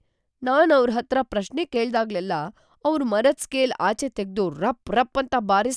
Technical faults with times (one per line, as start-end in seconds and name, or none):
none